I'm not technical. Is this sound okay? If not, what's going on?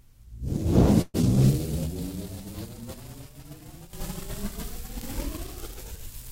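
No. From 1.01 to 1.16 s there is a call audio freeze: the last sound stretches into a brief fading buzz, likely from delayed network packets, then resumes where it stopped. At 1.22 to 1.25 s, a skip ahead drops roughly 70 ms of sound, so playback jumps forward with an almost seamless join.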